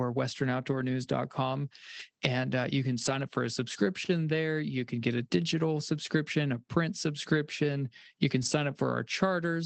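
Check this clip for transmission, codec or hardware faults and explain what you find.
There are four short stretches of lost packets rebuilt from error correction, at 0.71 to 0.81 s, 1.99 to 2.01 s, 2.97 to 3.11 s and 8.41 to 8.47 s, with 60, 20, 80 and 40 ms rebuilt. The durations fit runs of 20 ms packets. Each lost packet was replaced by the low-bitrate copy carried in the next one, so nothing drops out. Those spans sound briefly rougher and noisier. The call path's top end stops at 8 kHz.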